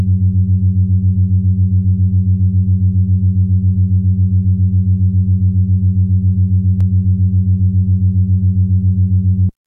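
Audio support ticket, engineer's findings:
DC step at 6.81 s. Low thump heard once; program sound continues unaffected. Waveform baseline jumps by about -19 dBFS, likely from converter recalibration or an offset input switching in, then decays away through a 20 Hz high-pass in the chain.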